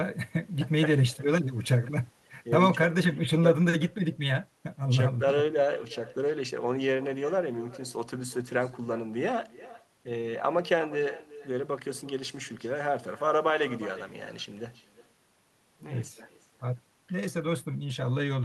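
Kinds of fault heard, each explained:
Echo with no canceller: the far end's loudspeaker feeds its microphone unchecked, so this speech returns roughly 0.4 s later as a thinner copy about 18 dB down.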